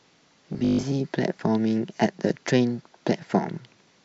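From 0.53 to 0.87 s, new audio likely arrived too seldom, so the playback software kept filling the gaps by replaying a short stretch of the most recent audio while skipping real material; roughly half of that span is repetition. The repeated piece is about 20 ms long, which stamps a fixed 50 Hz pitch onto the voice. The result is robotic sound from repeated short buffers: a stiff, metallic buzz that still loosely traces the speech.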